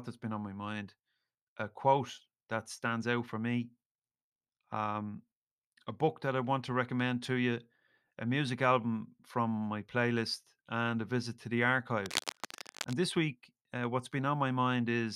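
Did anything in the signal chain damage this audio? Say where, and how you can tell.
Yes. From 12.06 to 12.94 s, between "a visit to the" and "this week uh what's", dense, ragged bursts of scratching noise sit over the speech, around 10 dB below it. This is cable scratch noise, likely from the analogue wiring stage: a worn cable or connector being moved, its contact resistance fluctuating rapidly. Unlike a digital dropout or buffer click, the noise is irregular and continuous across nearly a second, and the speech underneath never cuts out.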